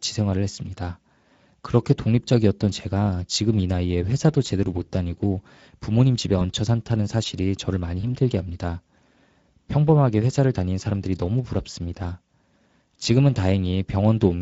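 Throughout, the speech carries plainly audible Speex codec damage, a hoarse, noisy texture that fits a Speex bitrate of about 16.8 kbps. On a spectrogram the harmonics look smeared and grainy.

At 6.39 to 6.45 s and again at 8.01 to 8.16 s, VoIP packet loss concealed by the speech codec appears. In each case the sound sounds like a single lost 20 ms frame. The decoder extends the previous pitch into a brief buzzy tone or coloured noise that fades, which shows as a decaying waveform envelope.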